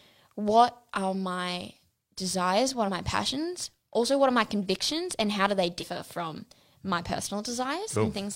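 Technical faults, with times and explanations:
2.84–2.89 s and 5.78–5.85 s, damaged data in a compressed stream: a brief chirp or blip cuts into the speech after "are my desires" and again after "and how do they". Corrupted bytes made the decoder misread frames, lose sync and hunt for the next header.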